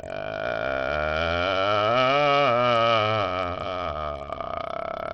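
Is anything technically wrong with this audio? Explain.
Yes. Throughout the music, heavy damage from likely Bluetooth SBC compression. Nothing sounds above 9.8 kHz. Coarse sub-band quantisation at a low bitrate, which fits about 64 kbps, leaves gritty noise and aliasing.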